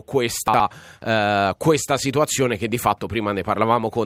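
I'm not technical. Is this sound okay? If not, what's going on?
No. Chunks out of order, from 0.48 to 0.6 s: one 60 ms piece arrived late and plays after the next, so that moment sounds jumbled.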